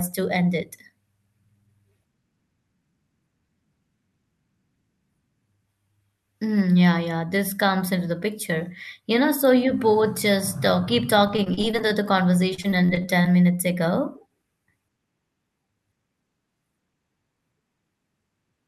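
A speech clip that turns choppy and robotic from 11.27 to 11.92 s and again from 12.54 to 13.26 s, with small pieces missing. This is repeated packet loss: gaps of up to about 37 ms keep recurring, and each is patched by stretching the previous sound.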